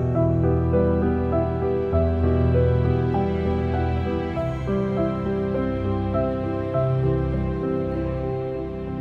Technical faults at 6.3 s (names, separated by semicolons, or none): none